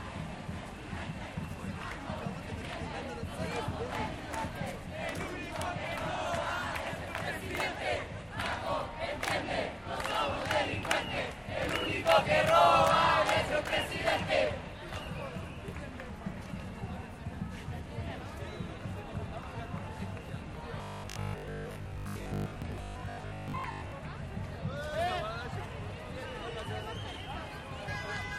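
From 20.78 to 23.94 s, new audio was likely reaching the playback software too seldom, so it filled the gaps by looping the last short buffer while the real material was skipped, producing robotic sound from repeated short buffers. The repeats land every 20 ms, which imposes a fixed 50 Hz buzz on the sound, and with most of that stretch made of repeats, it turns rigid and metallic while only loosely tracking the original.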